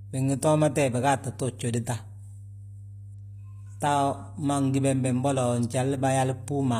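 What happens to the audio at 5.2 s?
At 5.2 s you're hearing the same two problems that run through the whole clip. First, mains hum: a steady 50 Hz tone sitting around 15 dB under the speech, the kind of thing a ground loop or nearby transformer bleeds into the signal. It's present all the way through, not just at that moment.

Second, the top end is plainly damaged. The treble sounds synthesized rather than recorded, with s sounds going gritty or lispy and nothing above 15.4 kHz. That's likely HE-AAC compression: it codes only the lower band and rebuilds the highs by copying lower content upward, so harmonics don't line up. The damage fits something like HE-AAC v2 at around 24 kbps.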